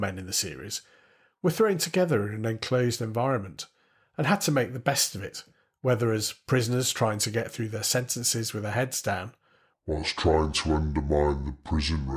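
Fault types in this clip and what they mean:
wrong sample rate: playback runs unconverted at what fits 32 kHz for 48 kHz audio, so after "with their heads down" speech slows to two-thirds speed, 7 semitones lower.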